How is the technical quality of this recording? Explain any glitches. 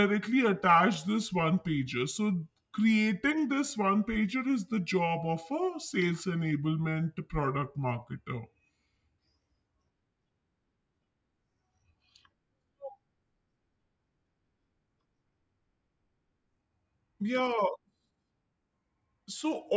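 The recording suffers from a wrong sample rate throughout. Playback runs at 0.73 times normal speed, about 5.5 semitones low, which fits 22 kHz audio played at 16 kHz. Speech sounds slow and deep.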